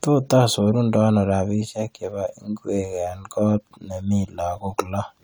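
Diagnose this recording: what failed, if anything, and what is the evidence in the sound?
The codec stage failed: low-bitrate audio saved at a high bitrate. Throughout the speech, the low-rate coding artefacts persist despite the high bitrate, with bandwidth extending to about 20.2 kHz. This likely points to a roughly 64 kbit/s AAC encode later re-saved as high-bitrate MP3, which cannot restore what was discarded.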